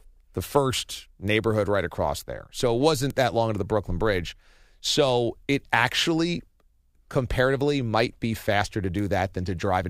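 Bit error spikes at 1.28 s, 3.10 s and 8.99 s: each is a single sharp tick. One sample's value has been flipped in a single bit, so it leaps by a power of two and snaps straight back. The spikes reach about -18 dBFS, about -12 dBFS and about -18 dBFS respectively, with the middle one loudest. Lasting only one sample, each click spreads broadband across the spectrum and bears no relation to the speech around it.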